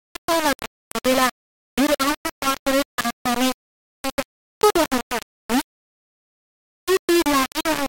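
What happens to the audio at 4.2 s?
At 4.2 s the speech is being carried by far too few amplitude steps, and this holds for the whole clip, not just that moment. The likely cause is low bit depth without dither: samples were rounded to the nearest coarse level, which fits roughly a 3-bit quantiser. Because the error tracks the waveform, it sounds like harsh grainy distortion riding on the voice, nearly as loud as the speech itself, and quieter passages sputter or drop out between steps.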